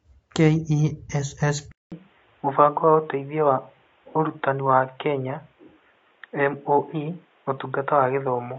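From the opening of the speech and through all of it, the voice has a rough, grainy texture, with noise filling the gaps between pitch harmonics. That points most likely to low-delay AAC compression of the AAC-ELD kind used for calls, at a rate that fits around 32 kbps. Its short frames cannot separate the harmonics cleanly, so the grain follows the voice itself. The damage is plainly audible and stays constant, unlike a degradation that starts at a particular moment.

At 1.72 s the sound drops out for about 200 ms. From then to the end it is narrower and duller, with nothing above 3.8 kHz, and a faint new background noise sits far below the voice. The loudness stays about the same. This is likely an input switched to a poorer device. A codec bitrate drop would add more grain and smearing, but here the main changes are a hard band limit, a new noise floor and a gap at the switch point.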